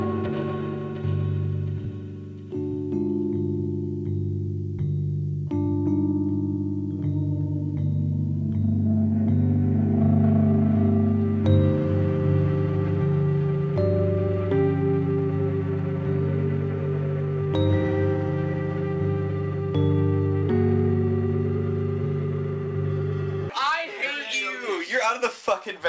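No technical faults can be heard; the audio has come through a call codec path with nothing above 8 kHz, which fits wideband G.722 at 64 kbps, and the coding noise that path brings, along with that high-frequency limit, are the only traces it leaves.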